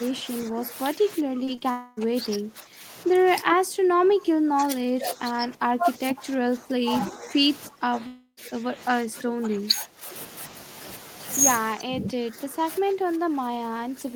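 From the start to 3.26 s, speech suppressed in double talk is likely at work: the echo canceller, unable to tell the local talker from loudspeaker echo while both sides speak, turns the whole signal down. The speech sinks by about 15 dB, thins out and breaks into patches.

Within that stretch come three short concealed packet losses, at 1.45 to 1.49 s, 1.55 to 1.59 s and 1.59 to 1.63 s. Each time about 20 ms of audio missed the decoder, and the receiver patched the gap by extending the preceding sound before blending back. Each is heard as a quick smear or wobble, and the last two run together into one slightly longer blur.

A likely long network dropout follows from 1.71 to 1.99 s, when about 260 ms failed to arrive. The receiver stretches the last sound across the whole gap as a buzzy, fading continuation with no silent stretch, and the speech resumes with that portion gone.

Double-talk suppression likely returns from 3.42 to 7.38 s, now the deepest at about 20 dB, and again from 7.67 to 10.09 s at about 15 dB. 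Inside the second stretch, a second likely long dropout at 8.07 to 8.39 s loses about 300 ms: a fading synthetic tail gives way to about 80 ms of silence before sound resumes.

A final likely bout of double-talk suppression runs from 11.75 s to the end, pulling the speech down by about 15 dB.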